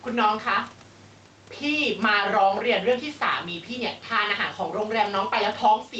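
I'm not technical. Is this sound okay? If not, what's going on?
No, not quite. There is gain pumping throughout the speech. The level seems set too high, and an automatic control keeps pulling it down on loud moments. Loud and soft parts end up closer in level, so the sound is squashed. Likely an over-eager limiter.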